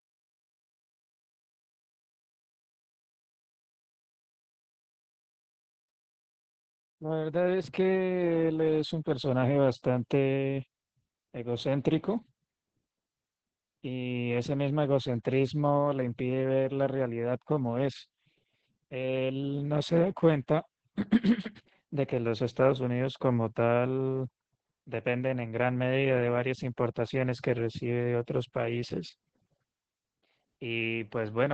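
From start to finish the speech carries heavy Opus voice compression. The top end stops around 8 kHz and the coarsely coded excitation makes it sound muffled, hoarse and a bit robotic, which fits SILK mode running at only about 10 kbps.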